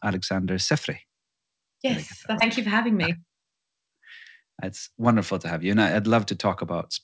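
At 2.40 s the speech jumps forward. This is a skip ahead. Roughly 0.7 s of speech never plays, and nothing fills the gap. The stretch was dropped while later audio was already waiting, which cut the delay by about the same amount. The two sides of the cut meet almost directly. You hear an abrupt splice, and the speech suddenly picks up further along.

A jitter buffer speed-up follows from 2.66 to 3.96 s. The speech runs at about 118% of normal rate. The pitch stays the same. The buffer was still holding more audio than it wanted. To shrink it, the receiver cut out many short pieces, each one or a few pitch periods long. About 0.3 s is removed this way. The speech sounds rushed. A milder speed-up runs from 4.42 to 5.08 s at about 109%, removing about 70 ms. This one is a slight hurry. Throughout, the G.722 call path at 64 kbps carries nothing above 8 kHz.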